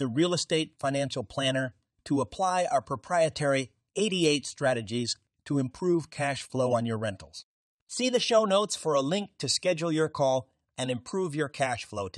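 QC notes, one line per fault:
No faults detected in this clip.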